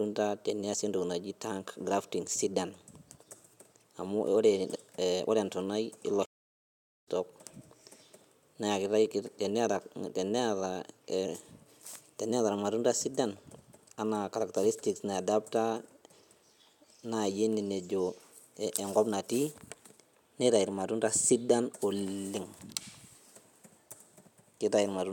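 At 6.25 s the speech cuts out abruptly in mid-flow, and the output stays silent until 7.08 s, a gap of about 0.81 s. This is a playback stall: the sound does not fade or degrade, it simply stops and later continues. The likely cause is the player's buffer running dry, or its playback thread being blocked, so that no samples reached the output until it recovered.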